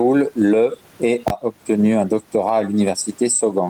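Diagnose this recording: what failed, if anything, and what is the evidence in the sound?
Gain pumping runs through the whole recording. The gain swings by around 10 dB whenever the speech gets loud, so loud and quiet passages sit unnaturally close in level. The room noise is normally about 40 dB below the speech. The likely cause is input gain set far too high at the analogue or converter stage, with a fast limiter or compressor in the call processing pulling the level down on every peak.

Invalid numbers at full scale appear from 1.28 s to 1.30 s. They produce a sudden loud bang where the output is pinned at one extreme value for about 21 ms. The event is audible as a single burst rather than separate pops at its start and end. Its length suggests a 1024-sample processing block at 48 kHz, which points to the driver or buffer stage. A calculation there produced infinite or undefined values, and the sample-format conversion clamped that whole block to the largest positive or negative value.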